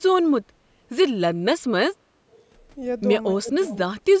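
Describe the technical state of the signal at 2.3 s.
At 2.3 s the speech is intact, with nothing wrong beyond the usual call microphone processing, whose high-pass filter trims the lowest bass and whose content stops at 8 kHz.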